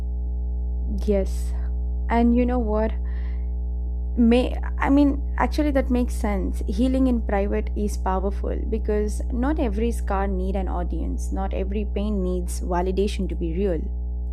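A ground loop or nearby transformer is coupling the 60 Hz power line into this speech recording, producing mains hum throughout, a steady low tone roughly as loud as the voice.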